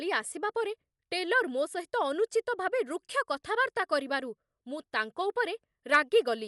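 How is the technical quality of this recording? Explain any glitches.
The quality is poor, with plainly audible codec damage. It runs through the whole speech clip. The sound is dull and narrow, with nothing above about 11.5 kHz. A rough, fluttering noise clings to the tonal parts. The likely cause is Dolby Digital compression at a low bitrate, around 64 kbps. Starved of bits, the encoder cuts the top of the band. Many frequency lines get no detail at all. The decoder fills them with noise, and that roughens the tones.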